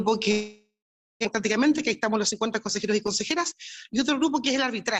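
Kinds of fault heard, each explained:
Long network dropout: from 0.31 to 1.27 s the sound stretches into a fading buzz or hiss, then silence, resuming with 0.8 s gone; likely packets stopped arriving.
Jitter buffer speed-up: from 1.57 to 3.52 s the audio runs 5% fast at unchanged pitch, as the receiver trims short pitch-period pieces to shed excess buffered delay.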